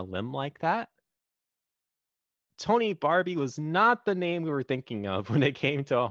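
No technical faults can be heard anywhere in this recording.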